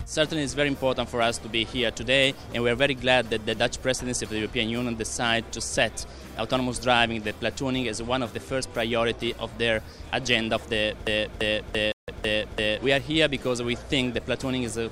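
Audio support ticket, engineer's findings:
Broken-record loop, 11.07 to 12.78 s: a 339 ms fragment repeats exactly, back to back, five times, and the audio due in that span is missing. Likely cause: player or stream stalled and kept re-sending its last held buffer.

Bluetooth stall, 11.92 to 12.08 s, inside the loop: 159 ms dropout to silence, then playback resumes. Likely cause: interference delayed packets, headphone buffer ran dry, output paused until retransmissions arrived.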